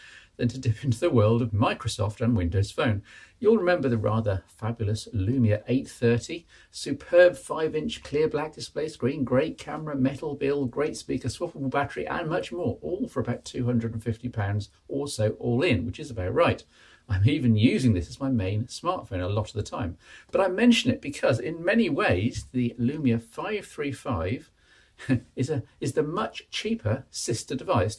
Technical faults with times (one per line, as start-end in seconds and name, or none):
none